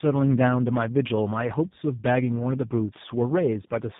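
Rough, muffled, warbly speech runs through the whole clip, with nothing above 3.8 kHz. This is tandem speech coding. The sound points to a GSM full-rate coder followed, across a G.711 link, by G.729A, each re-encoding the previous coder's already degraded output.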